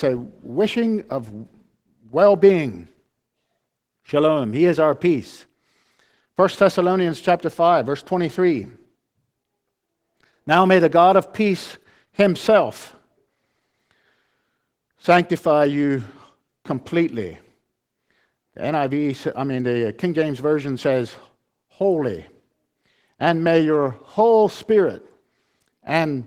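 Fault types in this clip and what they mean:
Opus voice compression: speech coded at a low rate with the codec in hybrid mode, a linear-prediction layer carrying the lower band and a transform layer above 8 kHz. Coarse excitation coding makes the voice audibly hoarse and slightly robotic across the whole clip, and fits roughly a 16 kbps stream.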